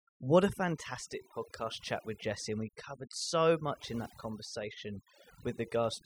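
Overdone noise removal runs through the whole speech clip. Noise reduction was pushed too hard, so any frequency band close to the estimated noise level is pulled far down or switched off, and the softer parts of the voice are cut along with the noise. The gaps sit in near silence scattered with twinkling specks. A noise gate differs: it shuts the whole signal at once, leaving no glittering residue between phrases.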